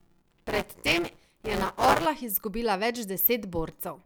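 From the start to 2.06 s the speech carries buffer tearing. The writer and reader of the playback ring buffer have drifted so that they cross inside each period, and roughly a third of every buffer replays audio from about 10 ms earlier, with hard joins either side. The result is a steady robotic rattle at 172 Hz, which fits a 256-sample buffer. Unlike underrun dropouts, there are no silent gaps, and the buzz falls away whenever the signal pauses.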